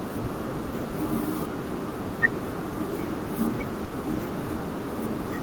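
From 3.84 to 4.05 s, a burst of packet loss: roughly 70 ms is concealed by a fading extension of the last sound, then speech resumes with material skipped.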